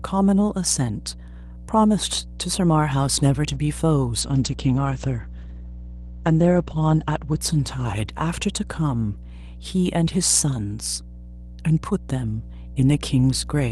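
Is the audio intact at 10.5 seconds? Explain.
No. At 10.5 seconds the speech carries mains hum, a fault present throughout the clip rather than only at that moment. Power-line energy from a ground loop or a nearby transformer has leaked into the signal path, adding a steady 60 Hz tone that sits roughly 10 dB below the speech and is easily heard as a low drone. On a spectrogram it shows as an unbroken horizontal line at 60 Hz. In the waveform, a regular ripple with a period of about 16.7 ms fills the pauses.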